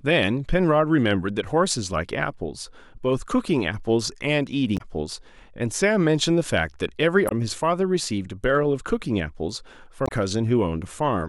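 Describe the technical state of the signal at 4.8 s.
A brief glitch cuts through the speech from 4.74 to 4.81 s, lasting about 70 ms. This is damaged data in a compressed stream: corrupted bytes make the decoder misread those frames and lose sync until it locks onto the next valid frame header.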